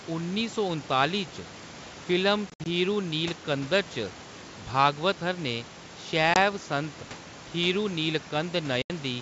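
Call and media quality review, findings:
Packet loss on an ADPCM call, 2.50–2.67 s: about 100 ms of dropouts scattered over 160 ms, longest gap 60 ms, around five packets. Sharp-edged holes, then slightly distorted speech as the decoder's predictor and step size resync. 6.34–6.37 s: one 20 ms hole, likely a single packet. 8.82–8.90 s: an 80 ms gap, a few packets. Spectrogram shows full-height blank columns. The waveform drops to silence, then recovers uneven. Room noise sits about 20 dB below the speech, in the G.722 64 kbit/s wideband path.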